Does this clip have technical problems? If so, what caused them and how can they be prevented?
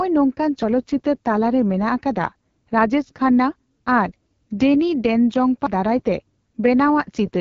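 Yes. Throughout the speech there is AMR wideband (HD Voice) codec damage, plainly audible. The voice is rough and raspy because the coder rebuilds it from a pulse-driven vocal tract model with too few bits, which fits the 8.85 kbit/s mode, one of its lowest. Nothing is present above 7.5 kHz. What separates this from low-rate MP3 or AAC is the gritty buzz rather than watery swirling, with hiss-like noise fill above 6.4 kHz. To prevent it, carry the call at 12.65 kbit/s or higher.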